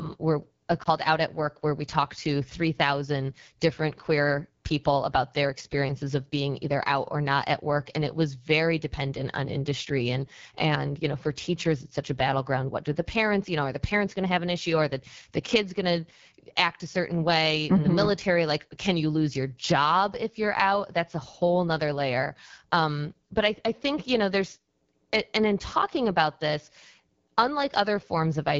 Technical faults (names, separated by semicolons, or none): AMR wideband (HD Voice) codec; lost AMR speech frames